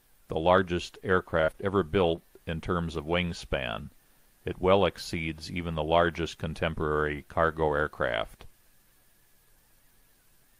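Short concealed packet loss occurs at 1.41 to 1.45 s, 1.45 to 1.50 s, 1.52 to 1.56 s and 2.16 to 2.19 s. Each time, about 20 ms of audio failed to arrive in time, and the receiver patched the gap by extending the preceding sound before easing back into the real signal. The first three cluster into a brief smeared, wobbling stretch; the last is a single short smear.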